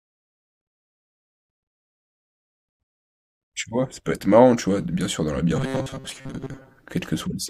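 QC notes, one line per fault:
5.56–6.84 s, robotic sound from repeated short buffers: a rigid, metallic 133 Hz buzz, likely from replaying a 7.5 ms buffer while most incoming audio is skipped.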